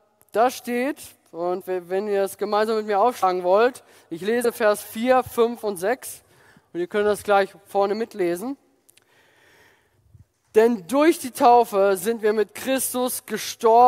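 At 1.6 s, 3.22 s and 4.44 s the audio skips ahead by roughly 70, 100 and 40 ms. These are compressed frames being skipped: whole 21.3 ms frames never play.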